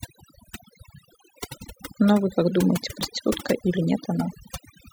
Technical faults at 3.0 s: overdone noise removal; dropped buffer (overrun)

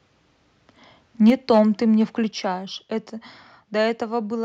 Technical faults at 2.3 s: microphone volume stepped down

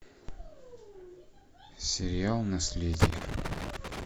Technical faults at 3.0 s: loose connector crackle

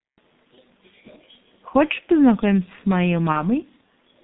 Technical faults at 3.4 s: G.723.1 codec; VoIP packet loss concealed by the speech codec

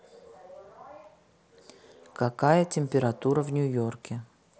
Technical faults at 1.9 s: none

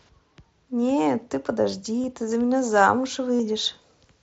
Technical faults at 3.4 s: pre-emphasis left on; concealed Bluetooth headset packet loss

